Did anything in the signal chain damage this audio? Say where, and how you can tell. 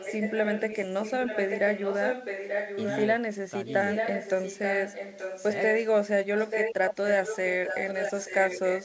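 Yes. An echo leak in the call processing is audible from 0 to 3.06 s, 3.66 to 5.89 s and 6.34 s to the end. A copy of the speech trails it by a fixed 0.88 s, roughly 5 dB down, and about 10 dB down in the middle stretch. Because the copy is a discrete, constant-delay repeat, it is not room reverb. It most likely comes from a far-end loudspeaker whose echo canceller let its microphone's pickup return.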